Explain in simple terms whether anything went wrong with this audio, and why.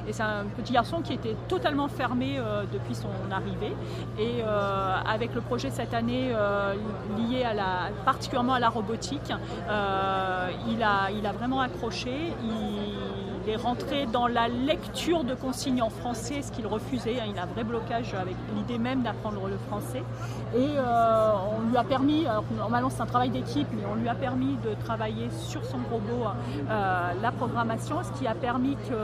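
Nothing went wrong with this audio, because no problems can be heard anywhere in it.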